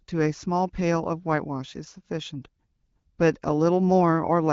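Nothing stood out on listening to this speech, which comes through the AMR wideband (HD Voice) codec at 12.65 kbit/s with only the light coding character expected at that rate.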